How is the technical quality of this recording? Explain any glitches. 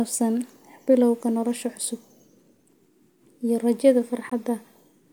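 The recording has one glitch: a brief gap in the speech at 4.30 s, sounding like a Bluetooth dropout. The likely cause is an audio packet that failed to reach the headphones in time and was discarded, leaving the output with nothing to play until the next good packet arrived. The result is a hole of about 19 ms, which fits a single lost packet. The speech then resumes slightly further on, as though it had kept playing through the gap.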